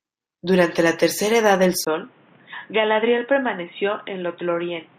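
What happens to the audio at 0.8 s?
Nothing goes wrong at 0.8 s: the speech runs on intact through that moment, with no dropout, click or other fault.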